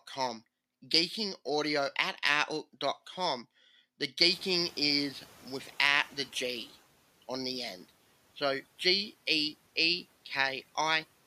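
Speech with a noise suppressor catching up: room noise jumps by about 24 dB at around 4 s, settling roughly 26 dB below the speech. From 4.21 s the suppressor's noise estimate lags, so the new noise comes through with less reduction, then sinks by about 7 dB as the estimate adapts over 2.5 s, until 6.71 s. On a spectrogram the broadband floor brightens abruptly, then visibly dims across those seconds; the waveform shows a thickened baseline that slowly narrows.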